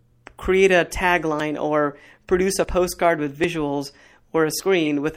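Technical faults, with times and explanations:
Throughout: MP3 compression at about 64 kbps, likely, gives plainly audible swirly, watery speech with treble cut off and weak detail flickering between frames.
0.89 s, 2.49–2.52 s and 4.86 s: corrupt frame decoded. Damaged frames were played anyway, putting energy at wrong frequencies: a faint blip at 0.89 s, louder chirps near about −15 and −20 dBFS.
1.4 s, 2.64 s, 3.44 s and 4.6 s: dropped buffer (overrun). Each is a jump with the speech skipping ahead by roughly 40 ms, with no gap, likely as unread samples were overwritten.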